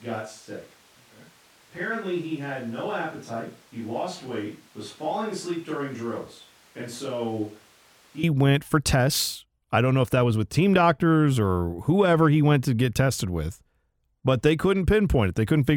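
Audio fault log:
0.00–8.23 s, switch to a distant microphone: Under way from the start. The speech sounds hollow and roomy, thin in the bass, about 10 dB quieter, with room noise only about 25 dB below it. Likely a far microphone replacing the close one. Close sound returns abruptly at 8.23 s.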